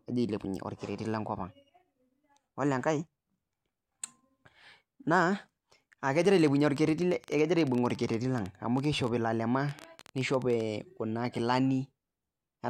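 Interference from nearby equipment or a faulty connection likely injects a train of clicks from 6.22 to 10.61 s, about fifty uneven pops, roughly 12 per second, about 5 dB above the speech.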